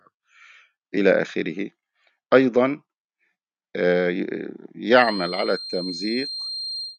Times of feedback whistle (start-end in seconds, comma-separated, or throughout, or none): 4.90-6.98